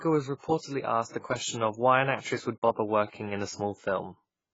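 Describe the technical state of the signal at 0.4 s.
At 0.4 s the speech carries AAC compression damage, present across the whole clip: nothing above 7.6 kHz, a dull, smeared tone and a warbling, fizzy edge on sibilants. It is heavy, likely from an AAC-LC encode at a low bitrate, which fits roughly 16 kbps.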